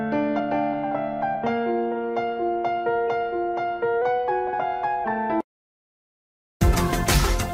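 The audio has two kinds of fault. From 4.02 to 5.04 s it suddenly plays about 5.6% faster and roughly 94 cents sharp, close to a semitone, then snaps back to normal. Speed and pitch move together in one abrupt step, not a gradual wobble like tape wow. That points to a drift correction step, likely from clock-matching software resetting its playback rate to rebalance a buffer. Separately, compressed frames are skipped at 4.52 s, inside the raised-pitch stretch, and again between 6.72 and 6.76 s. The sound jumps ahead by around 100 ms and around 150 ms, chunks that fit whole frames the decoder dropped or never received.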